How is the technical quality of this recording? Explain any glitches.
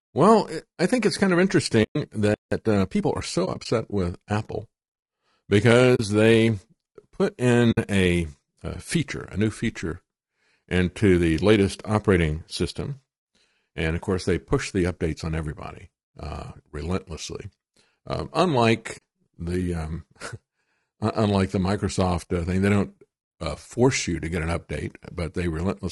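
The recording has audible technical problems: a coarse low-delay codec sound throughout, a brief stall followed by hurried playback, and several short muted dropouts.

Low-delay AAC compression: The speech was likely encoded with AAC-ELD at a low bitrate, consistent with roughly 32 kbps. Its short frames resolve pitch harmonics poorly, so the speech sounds plainly rough and grainy throughout, with noise filling the gaps between harmonics and a thin, artificial-sounding top end.

AAC frame loss with muting: Whole codec frames went missing, and the decoder replaced each one with silence. The overlapping windows fade the sound out and back in, leaving soft-edged holes. These occur at 1.83 s, right after "think it's kind of" (120 ms), scattered across 3.45 to 3.66 s (80 ms lost in brief gaps of about 20 ms each), at 5.95 s (40 ms), at 7.71 s between "they put" and "a a feature a" (60 ms), and at 18.97 s just before "the um" (40 ms). 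The lengths fit 20 ms frames.

Playback stall: The player likely ran short of data, so output stopped from 2.34 to 2.52 s, about 0.18 s. The speech cuts off mid-flow into silence and then resumes.

Time-compressed catch-up: To clear the backlog left by the stall, the player removed small pieces of audio and cross-faded across the gaps. From 2.52 to 3.22 s, the speech runs at about 1.25 times normal speed but keeps its normal pitch, so it sounds rushed.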